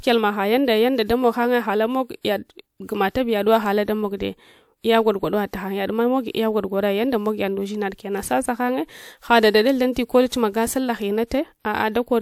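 Speech with pre-echo before four sharp onsets: at 2.21, 9.93, 10.29 and 11.27 s. A short hiss leads each attack by 33 to 48 ms. The codec spread coding noise across the whole block, filling the quiet moment before each onset.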